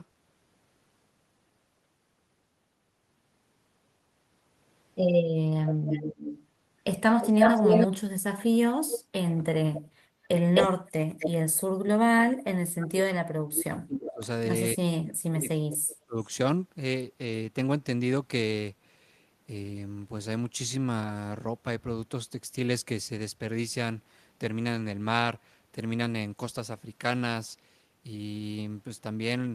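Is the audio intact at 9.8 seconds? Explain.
No. From 9.76 to 9.81 s there is an echo leak: a faint copy of the speech, about 15 dB down and 260 ms late, likely loudspeaker pickup the canceller missed, unlike a room reflection. Then, from 9.86 to 10.28 s, background gated by the echo canceller: room sound dips by about 12 dB for under half a second, then returns, a clamp rather than a dropout.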